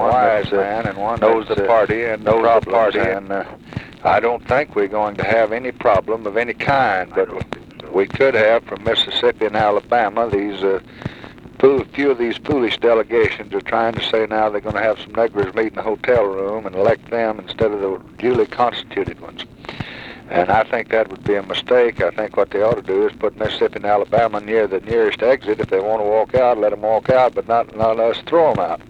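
A doubled audio track runs from the start until 3.14 s: a full-band second copy trails about a second behind at roughly equal level, then cuts off abruptly. Unlike an echo or reverb, it has no decay or room colour, likely from a slower second capture path.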